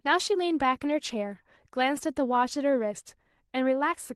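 From 0.71 to 0.85 s there is a lost packet rebuilt from error correction: the missing audio was filled from a low-bitrate backup copy carried in later packets, so there is no gap, just a rougher, noisier stretch of speech. The roughness fits about four packets, roughly 80 ms of rebuilt audio. On a spectrogram that span looks smeared and grainier beneath the Opus call path's 12 kHz ceiling, and the waveform shows no dropout.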